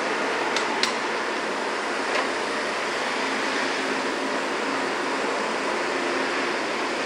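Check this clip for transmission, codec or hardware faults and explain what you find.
A thin, high whistle sits under the sound for the whole clip, and it is a switching supply whistle. The tone wanders between about 2.47 and 2.55 kHz, roughly 30 dB below the main sound. This kind of whistle comes from a switching power supply that has dropped into an audible burst mode or is beating against a second supply. Its switching energy leaks into the audio path. As the load on the supply shifts, the pitch drifts within that narrow band.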